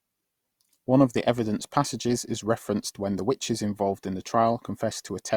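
From start to finish the speech has generation loss, likely from three or so passes through Opus at around 64 kbit/s. Each re-encode quantises on a shifted frame grid, so it sounds swirly, hollow and smeared, with blurred attacks. Spectrograms show softened onsets.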